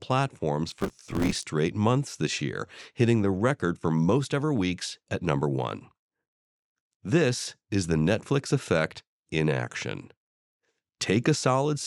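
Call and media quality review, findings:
Processor overload crackle, 0.69 to 1.43 s, right before "months this year hitting". Gritty tearing over the speech, clears once load drops. CPU missing dozens of short deadlines in a row (fits roughly 5 ms buffers), each gap refilled with stale audio, hard edges.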